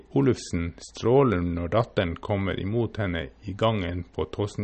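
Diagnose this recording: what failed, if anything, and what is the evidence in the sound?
MP3 compression throughout the speech: nothing sits above 8.4 kHz, and plainly audible codec damage runs through it. The likely cause is a bit-starved MP3 encoder at the codec stage, consistent with about 37 kbps, which cuts the treble and switches weak frequency lines on and off between frames.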